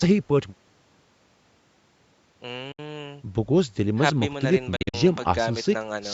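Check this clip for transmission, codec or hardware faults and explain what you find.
Two short gaps break up the speech, both pointing to a Bluetooth dropout. At 2.72 to 2.79 s about 64 ms of sound vanishes, which fits three lost packets. From 4.76 to 4.94 s about 128 ms goes missing in several holes spread over roughly 170 ms, the longest about 43 ms, consistent with six lost packets. The likely cause is packets failing to reach the headphones in time, so output drops to silence and the speech resumes further along, as though it had continued underneath.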